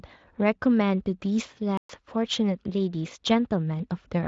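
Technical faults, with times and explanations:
1.77 to 1.89 s, playback stall: the speech cuts to silence for 120 ms mid-flow, then resumes. The likely cause is the player running dry of buffered data or its audio thread being blocked. The gap is clear against the lightly coded Speex sound.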